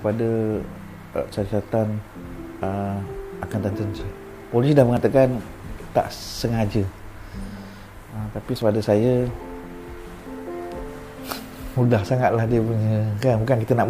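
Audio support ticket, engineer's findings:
Small forward jumps in the sound at 4.97, 6.32 and 8.62 s, each skipping about 20 ms. Likely dropped buffer (overrun): capture buffer overwritten before being read, ends spliced together.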